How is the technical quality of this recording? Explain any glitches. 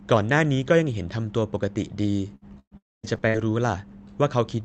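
The recording has clear network damage in the second half. The speech breaks up twice, in overlapping stretches. It comes through a call codec whose top end stops near 8 kHz.

Repeated packet loss (robotic sound) runs from 2.35 to 3.40 s. Four gaps fall in that span, the longest about 118 ms. The receiver fills each hole by stretching the last bit of sound, and then the next hole arrives. About 23 percent of the span is patched this way. That rebuilt sound, around a fifth of a second in total, gives the speech a choppy, robotic texture with pieces missing.

A long network dropout sits inside that stretch, from 2.77 to 3.06 s. Here the sound first smears into a fading buzz as the receiver carries the last audio forward. It then falls to near silence for about 230 ms. When the speech returns, the lost part is simply gone. The timing shifts slightly afterward, by a small amount on the order of tens of milliseconds. 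The likely cause is a burst of packets that never arrived.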